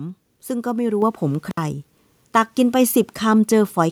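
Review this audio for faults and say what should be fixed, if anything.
Around 1.02 s there's a microphone volume step-up: the call software decided the mic was too quiet and raised input gain by about 5 dB, so voice and background jump together. Fix it by locking the input level and turning off automatic mic adjustment.

From 1.51 to 1.57 s you get an intermittent contact, a loose cable or plug opening for about 61 ms so the sound drops out. Reseat or replace that cable and make sure the connector seats firmly.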